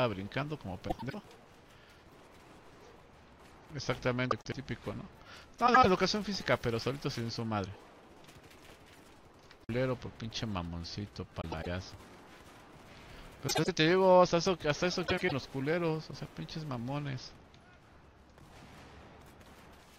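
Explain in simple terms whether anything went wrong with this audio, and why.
Something did go wrong: six short spots where frames arrived out of order. At 0.88, 4.31, 5.66, 11.41, 13.47 and 15.07 s, a quarter-second or so of sound plays with its two halves swapped, each half about 105 ms (or 78 ms at 5.66 and 13.47 s). You hear a quick garbled flutter. Nothing's missing; it's just the same bits shuffled.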